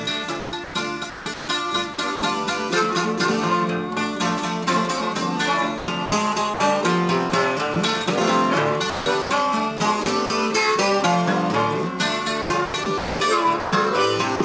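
Sound chopped by the voice detector turns up five times: 0.40–2.22 s, 5.78–6.60 s, 7.30–7.76 s, 8.90–10.30 s and 12.42–13.72 s. The audio stutters, with synthetic comfort noise standing in for about 620, 220, 40, 320 and 520 ms of those stretches. A sender's detector gating quieter bits as background is the likely cause.

Then at 14.36–14.40 s, 40 ms of sound is dropped by the voice detector. The detector likely shut off transmission, so it briefly gives way to steady comfort noise right at the tail.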